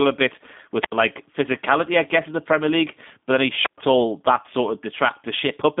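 From start to finish the speech sounds rough and slightly synthetic, with a thin telephone band of roughly 200 Hz to 3.6 kHz and nothing above 3.7 kHz. This is G.729 codec damage: the speech is rebuilt from a vocal-tract model and a few pulses per frame, which fits an 8 kbit/s G.729A stream.

At 0.79 s and again at 3.63 s, a brief surge of hiss gives way to a hole of near silence before the speech returns, at 0.94 s and 3.78 s. These are wireless microphone squelch dropouts. The radio signal faded, so the receiver's squelch muted its output for about 77 ms and then 117 ms.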